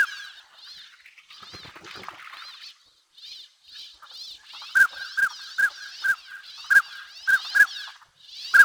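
A filter restarted on every block runs through the whole clip. Each block opens from silence, so a small click starts every one. These clicks repeat at 345 Hz. That fits a 128-sample block. The result is a steady buzz that rises and falls with the sound's level.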